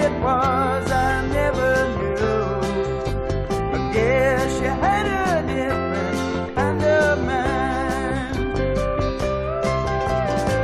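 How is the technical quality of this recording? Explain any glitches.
The recording has no technical glitches anywhere in the signal.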